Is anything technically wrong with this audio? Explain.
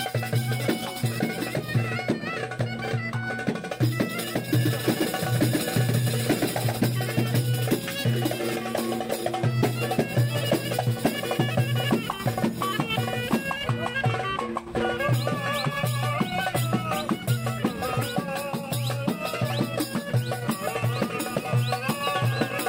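Yes. From 4.59 to 6.77 s there is a doubled audio track: an equally loud, dry copy trails around 150 ms behind, likely from a second, slower capture path.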